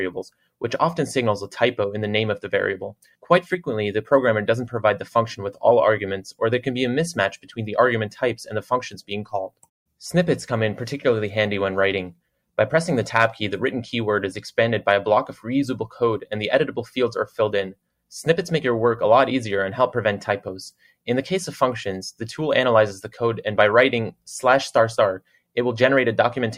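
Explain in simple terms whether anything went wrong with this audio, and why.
Three brief dips come from sound cut by the noise suppressor, at 2.93–3.3 s, 7.36–7.54 s and 8.95–9.67 s. The suppressor mistook parts of the sound for background noise and turned them down, so those moments briefly fade or go thin.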